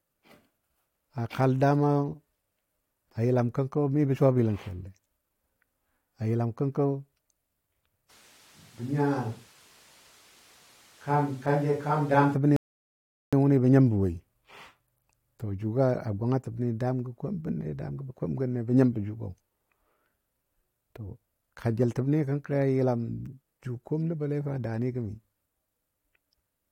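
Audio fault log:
8.11–12.33 s, switch to a distant microphone: the speech abruptly turns roomy and hollow with thinner bass, drops about 5 dB and sits over room noise only about 30 dB down, then snaps back. The close microphone likely dropped out, leaving a farther pickup.
12.56–13.33 s, rebuffering stall: playback cuts to silence for 0.76 s, then resumes exactly where it stopped with nothing missing. The player exhausted its downloaded audio and waited for more data, so the gap adds time rather than removing content.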